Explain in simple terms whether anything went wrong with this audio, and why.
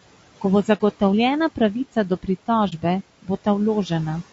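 Throughout the clip the speech sounds rough and grainy, with a hiss between tones and a thin, artificial top end. This is likely low-delay AAC compression, the kind used on video calls, squeezed hard so too few bits are left to capture the voice cleanly.

Twice the sound briefly fades to nothing and back: at 0.77 to 0.81 s, and at 2.69 to 2.73 s, right after "pravica do". Each is AAC frame loss with muting. One chunk of audio went missing and the decoder filled it with silence, giving a brief dip.

Between 3.22 and 3.47 s, parts of the speech drop in level for about a tenth of a second in total and sound swallowed. This is speech cut by the noise suppressor, which mistook some of the speech for background and turned it down along with the faint room noise.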